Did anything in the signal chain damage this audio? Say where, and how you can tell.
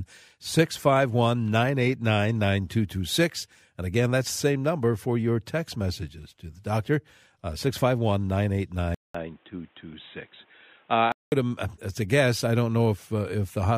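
Yes. From 8.95 to 11.32 s the speech goes suddenly dull and boxy, with nothing above about 3.8 kHz. It opens with a 200 ms gap of silence and brings in a different, low background hiss, roughly 40 dB under the voice, while loudness stays about the same. That points to the input likely being switched to a poorer device at the driver stage, a narrower-band mic or headset call profile, before the original input returns.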